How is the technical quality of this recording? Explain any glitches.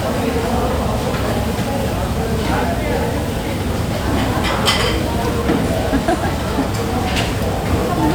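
Nothing goes wrong technically here; the audio runs without any glitches to explain.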